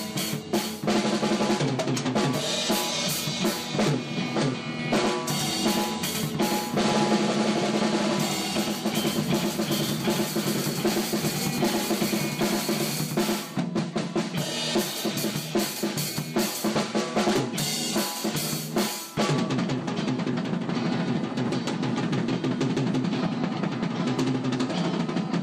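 From 4.79 s to 13.59 s, a second copy of the signal was likely mixed in through a slower capture path, producing a doubled audio track. A dry, full-band duplicate trails roughly a tenth of a second behind, about 5 dB quieter, and appears and vanishes abruptly.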